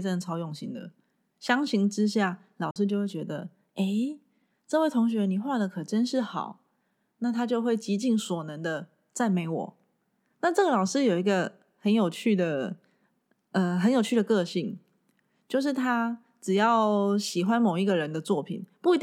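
A Bluetooth dropout at 2.71 to 2.76 s silences the speech briefly, and it then resumes further along as if it had kept playing. Packets likely reached the headphones too late and were discarded; the missing 46 ms fits two lost packets.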